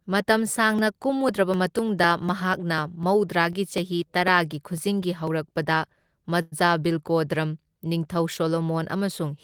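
From 0.29 s to 5.52 s the speech carries periodic USB or driver dropouts: a small tick or pop every 0.25 s, about twenty in all. Each time, something stalls the audio path and roughly a millisecond of signal is skipped, so the waveform jumps abruptly from one level to another. On a spectrogram these show as a regular comb of thin vertical broadband lines, evenly spaced. They are only audible where there is speech underneath.

At 6.41 s a call audio freeze holds the sound for 104 ms, until 6.54 s. Instead of going silent, the last fragment of speech is stretched into a brief buzzy tone. The likely cause is packets arriving late and the jitter buffer running dry. Nothing is lost, but everything after that point plays about 104 ms late. In the waveform the freeze appears as a short, repetitive looped pattern, and on a spectrogram as a flat, horizontally smeared block.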